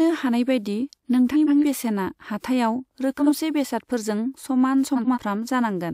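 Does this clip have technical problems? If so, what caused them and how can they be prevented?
Yes, there are frames out of order at 1.33–1.65 s, 3.18–3.32 s (just before "बेसादफोरजों समान") and 4.95–5.18 s (just after it). Two neighbouring blocks of about 139, 46 and 93 ms swapped places, giving a garbled flutter. Sequence-numbered packets with a reordering jitter buffer would prevent it.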